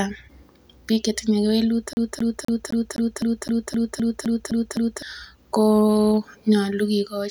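Speech clip, and right after "biik chetinye" it gets CD stuck on one turn: a 0.26 s slice repeats 12 times from 1.93 to 5.02 s, muting briefly at each laser jump.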